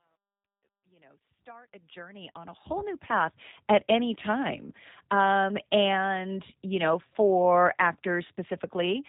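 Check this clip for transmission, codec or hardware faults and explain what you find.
Two faults are present: codec damage across the whole clip, and truncation distortion on the opening fade.

From start to finish, the speech has passed through the G.729 codec at 8 kbit/s. It rebuilds each 10 ms frame from a vocal tract model, pitch prediction and a few pulses, and discards everything above 3.8 kHz. The result is plainly audible as dull, slightly rough, synthetic-sounding speech.

From 0.0 to 3.37 s, the fade-in shows truncation distortion. The gain stage kept too few bits and added no dither, which fits about 11-bit resolution. Near the bottom of the fade, the waveform collapses into coarse steps. It sounds gritty, worst from 0.0 to 1.68 s, before the fade reaches full level at 3.37 s.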